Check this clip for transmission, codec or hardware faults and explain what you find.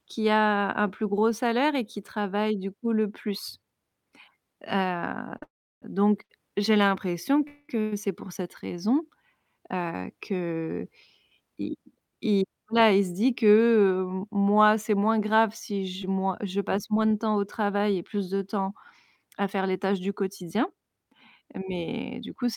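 Several network delivery faults are audible: a stuttering stretch containing two freezes, two speed-ups, and a run of scattered short gaps.

From 5.37 to 7.93 s, just before "c'est pour cette", there are repeated stalls (stutter). The sound drags and catches three times, holding up to 112 ms, because late packets repeatedly emptied the jitter buffer.

Inside that stretch, a call audio freeze at 5.43 to 5.83 s stops the sound and fades it to about 340 ms of near-silence. A second freeze at 7.47 to 7.70 s holds briefly. The cause is likely delayed packets, with playback resuming where it stopped.

A jitter buffer speed-up at 12.68 to 13.01 s, just before "se dit que", runs at 110% speed. Another, from 19.16 to 21.94 s after "et plus de temps", runs at 107%. Both sound hurried at unchanged pitch, because the receiver trimmed pitch periods to shed excess buffered delay.

Scattered short gaps from 16.02 to 17.80 s produce a few tiny ticks or hiccups of around 10 ms each. 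Isolated lost packets were patched by continuing the preceding sound, with 30 ms missing in total.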